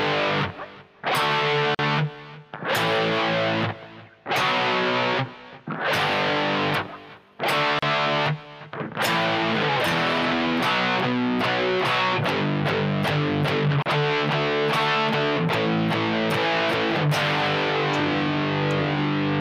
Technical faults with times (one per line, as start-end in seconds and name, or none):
1.75-1.79 gap at a join of encoded pieces
7.79-7.82 gap at a join of encoded pieces
13.82-13.86 gap at a join of encoded pieces